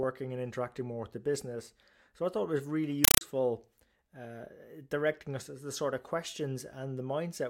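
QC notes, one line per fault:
3.05–3.21 s, compressed stream played as audio: right after "thought it was really" the speech gives way to very loud, harsh chattering static, short noise bursts about 5.3 ms long repeating 31.25 times a second with silence between them. A Dolby Digital bitstream is being played as plain samples instead of being decoded, so each coded frame comes out as a noise burst followed by zero padding. The burst length fits a 256 kbps AC-3 stream.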